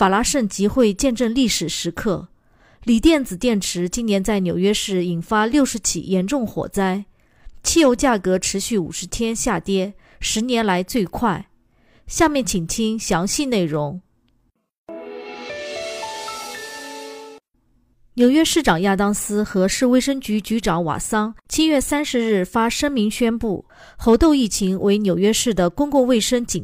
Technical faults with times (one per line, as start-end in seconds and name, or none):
none